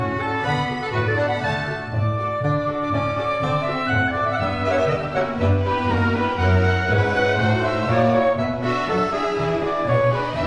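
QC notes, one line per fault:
No technical faults detected: the signal stays stable and intact for the whole clip, with nothing to log.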